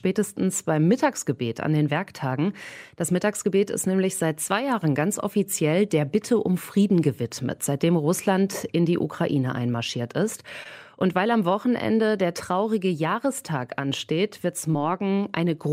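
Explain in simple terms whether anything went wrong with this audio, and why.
Something did go wrong, twice. At 10.63 to 10.67 s and again at 14.71 to 14.75 s there is short concealed packet loss. About 20 ms of audio arrived too late, so the receiver patched each hole by extending the preceding sound, leaving a brief smear or wobble.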